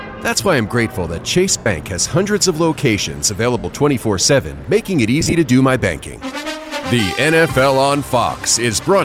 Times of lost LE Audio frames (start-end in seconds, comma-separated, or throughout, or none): 1.58-1.66, 3.59-3.65, 5.21-5.33